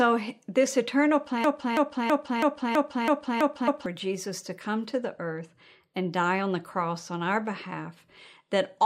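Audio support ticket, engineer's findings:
Broken-record loop, 1.44–3.86 s: a 0.33 s fragment of speech repeats exactly, back to back, eight times. Likely a stalled player or stream buffer replaying its last chunk. Whatever speech belonged in that stretch is gone.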